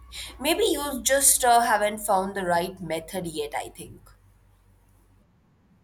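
A ground loop or nearby transformer couples the 60 Hz power line into this speech clip, producing mains hum, a steady low tone well below the speech, from 0 to 1.5 s, ending just before "haven't found the right".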